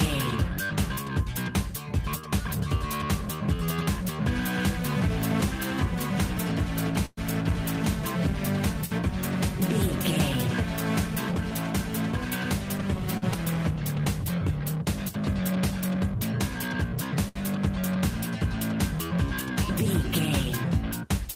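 At 7.05 s the audio freezes. From 7.05 to 7.19 s the last sound is carried on as a fading buzz for about 119 ms, including about 10 ms of near silence. It then resumes where it stopped. This is a call audio freeze, likely from packets held up in transit until the jitter buffer ran dry.

At 13.17 s comes a short stall from a late packet. The jitter buffer emptied, so the receiver stretched the last sound for 47 ms until the packet arrived. Nothing is lost. A sound is just held too long.

At 13.34 to 13.36 s there is a skip ahead. Roughly 70 ms of audio was dropped while later audio was already waiting. Playback jumps forward with almost no gap, and the two sides are joined nearly directly.

From 13.75 to 15.13 s comes a jitter buffer slow-down. The buffer was rebuilding its reserve, so single pitch periods were repeated again and again. That adds 60 ms. The audio runs at 96% speed, unchanged in pitch, and sounds slightly drawn out.

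At 17.28 s a second short stall from a late packet holds the last sound for 75 ms. It then continues from the same point.

From 19.85 to 21.35 s a jitter buffer speed-up trims the excess delay. Short pitch-period pieces are cut repeatedly, removing roughly 40 ms. The audio runs at 102% speed at the same pitch.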